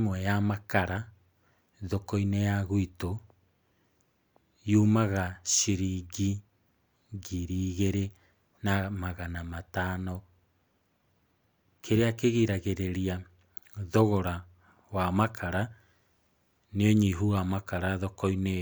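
No technical faults can be heard anywhere in this speech recording.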